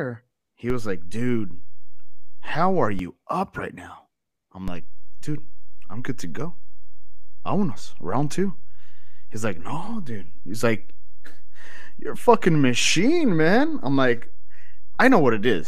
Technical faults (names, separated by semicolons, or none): DC step; compressed frames skipped